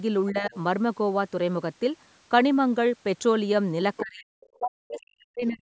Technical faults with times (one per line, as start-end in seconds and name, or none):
0.31-0.53 speech suppressed in double talk
0.54-0.58 other side's voice leaking through
3.97-4.02 other side's voice leaking through
4.02-4.29 speech suppressed in double talk
4.59-5.62 speech suppressed in double talk